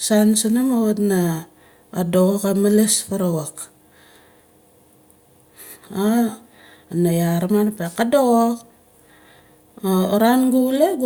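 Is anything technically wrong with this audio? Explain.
No, nothing technically wrong.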